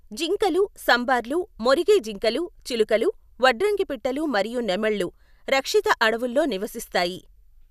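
Nothing here stands out as a technical fault; the speech runs along without any glitch or disturbance worth pointing to.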